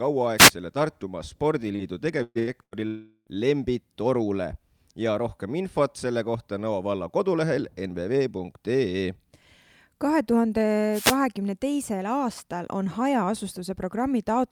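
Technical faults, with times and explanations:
0.37 to 0.51 s, wireless microphone noise hit: a short swish of static lasting about 0.13 s. The analogue FM radio link from the microphone faded briefly as reflected signals cancelled at the receiver, so receiver noise rose over the speech for that moment.
1.75 to 1.82 s, short concealed packet loss: about 40 ms of the call never reached the decoder. The receiver filled the hole by extending the preceding sound and then crossfaded back into real audio, so the gap is heard as a brief smear rather than a break.
2.23 to 2.74 s, burst of packet loss: three bursts in quick succession at 2.23 to 2.38 s, 2.39 to 2.50 s and 2.63 to 2.74 s, missing about 120 ms, 80 ms and 80 ms. In each, the receiver carried the last sound forward and turned it down, giving a held buzz or fading hiss. The first burst ends in roughly 20 ms of silence. Speech then resumes further on, with the lost portion absent.
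2.87 to 3.30 s, long network dropout: about 0.4 s of audio is missing. The last sound is stretched into a decaying buzz or hiss for most of that span, followed by about 20 ms of silence before speech returns. This points to a likely stall in packet delivery long enough to exhaust the receiver's concealment, and nothing from that interval is recovered.
10.91 to 11.17 s, wireless microphone noise hit: a burst of static of about 0.27 s, ending just before "teisel aastal on". This is a longer fade of the FM radio signal than the first hit, letting receiver noise rise over the speech until the signal recovered.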